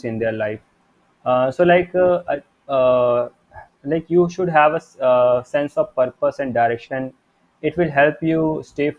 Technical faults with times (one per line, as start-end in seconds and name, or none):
none